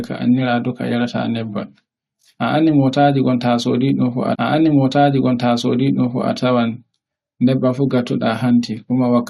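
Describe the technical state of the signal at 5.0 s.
At 5.0 s the speech is replaying material already heard. From 4.34 s to 6.32 s a stretch of about 1.98 s plays a second time, with a small blip at the jump back where the timeline snaps to the earlier point. This is a stream segment repeated fault: the player fetched or queued the same segment twice, so the programme runs that section again and the clip gains roughly two seconds.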